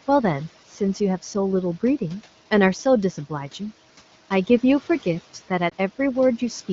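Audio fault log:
5.70 to 5.74 s, lost AMR speech frames: a brief dip or warble in the speech, which fits a single lost 20 ms frame. The wideband decoder filled the gap by repeating its last good pitch and vocal tract settings at falling gain, so the speech sags briefly and returns weak or rough for a moment.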